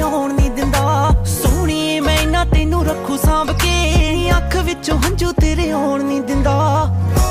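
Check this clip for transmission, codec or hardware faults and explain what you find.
Nothing in the clip points to a fault.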